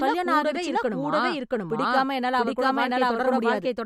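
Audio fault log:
Throughout, doubled audio track. The whole speech is heard twice. A second, full-band copy trails the first by about 0.7 s. It is roughly as loud as the original, so the two compete evenly. The late copy has no decay or room colour, so it is not an echo. The likely cause is a second capture of the same signal through a slower path, mixed back in with the first.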